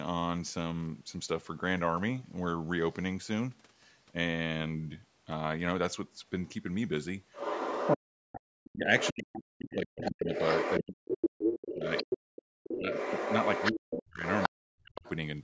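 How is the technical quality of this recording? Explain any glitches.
The recording has two related echo-cancellation problems in its second half, both tied to a far-end voice coming back through the talker's loudspeaker.

Other side's voice leaking through appears from 7.32 to 8.37 s, about as loud as the talker, and again from 8.99 to 9.23 s and 10.02 to 15.1 s, somewhat quieter. A second, separate voice sits under the speech. This is likely residual echo the canceller failed to remove. Unlike crosstalk, it tracks the far end's speech.

Speech suppressed in double talk runs from 7.96 to 12.9 s and from 13.72 to 15.07 s. The talker's voice dips sharply, by as much as 40 dB, or drops out in pieces. The cause is likely the canceller turning both voices down while both sides speak at once. This differs from network dropouts because it coincides with the leaked voice.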